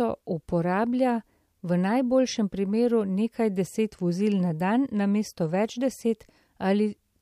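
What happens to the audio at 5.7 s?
Nothing goes wrong at 5.7 s; the speech carries on intact through that moment, with no dropout, click or other fault.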